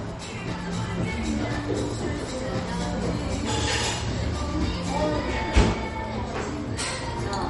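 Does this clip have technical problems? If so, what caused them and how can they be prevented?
Yes, the sound is dull throughout, with nothing above 11.2 kHz, and there's a watery, swirly texture with smeared attacks. That's likely MP3 compression damage, where the encoder cuts the top and drops weak detail, which fits a low bitrate around 45 kbps. Encode at a higher bitrate or keep a lossless copy.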